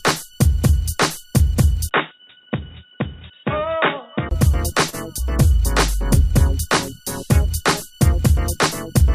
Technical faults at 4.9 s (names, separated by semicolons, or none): short stall from a late packet